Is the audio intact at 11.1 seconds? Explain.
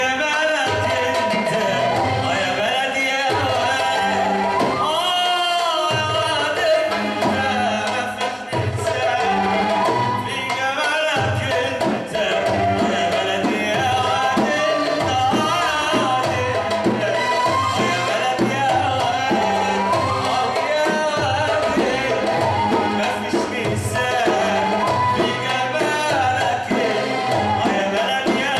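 Yes, at 11.1 seconds the audio is intact, with no dropout, click, distortion or other fault audible at that moment.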